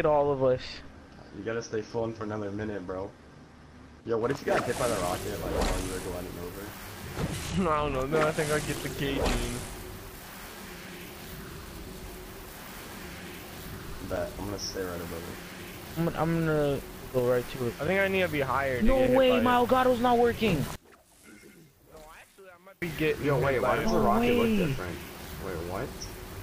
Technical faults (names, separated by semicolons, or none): one channel inverted